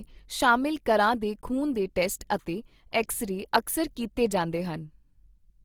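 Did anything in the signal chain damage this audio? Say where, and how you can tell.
Yes. Throughout the clip the speech sounds grainy and rough, with a noisy, hissy texture where the tonal parts of the sound should be smooth. The damage is plainly audible, yet the top end stays open up to about 20.4 kHz. This points to the codec stage, likely Opus compression in its full-band music mode at a rate that fits roughly 24 kbps. Short of bits, the encoder keeps each band's energy but fills the detail with folded or noise-like content.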